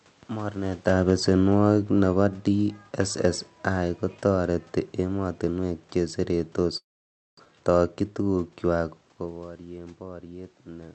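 Automatic gain falling from 0.85 to 2.81 s: the gain control judged the input too loud or its background noise too strong and eased its level down by about 5 dB, so the sound and its background sink together.

Long network dropout from 6.77 to 7.54 s, just after "kotoreti emotinwek che seretos": the last sound is stretched into a fading buzz or hiss, then roughly half a second of silence. Most likely about 0.6 s of audio never arrived and is lost for good.

Jitter buffer speed-up from 8.01 to 8.23 s: the receiver trimmed tiny pitch-period slices, around 40 ms in total, to reduce its backlog, so the sound runs about 15% faster at unchanged pitch and feels rushed.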